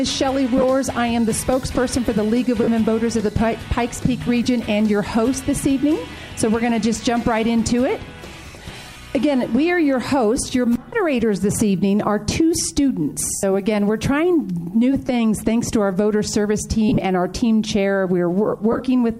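Brief noisy smears break into the sound at 0.57, 2.63, 4.44, 8.93, 13.35, 15.07, 16.89 and 18.72 s, each 15 to 75 ms long. This is lost LE Audio frames: the LC3 decoder refills each gap with the last spectrum, signs randomised, in steps fitting 7.5 ms frames. The slight codec compression is not a fault here.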